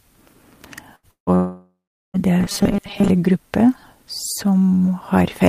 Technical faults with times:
0.95-1.06 burst of packet loss
1.11-2.17 long network dropout
2.40-3.09 robotic sound from repeated short buffers

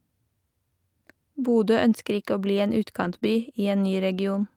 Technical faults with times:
3.03-3.25 lost packet rebuilt from error correction
3.19-3.23 short concealed packet loss

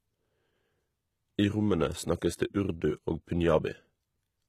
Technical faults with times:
0.00-4.49 HE-AAC compression

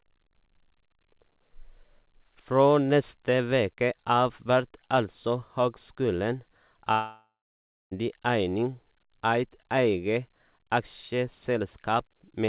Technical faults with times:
6.92-7.93 long network dropout

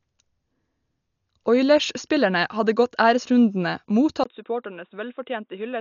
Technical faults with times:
0.00-5.80 Dolby Digital compression
4.24-5.80 input switched to a poorer device

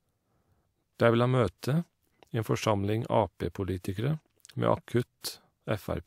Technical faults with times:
5.02 corrupt frame decoded

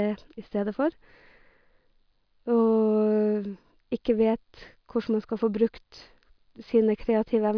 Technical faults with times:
none

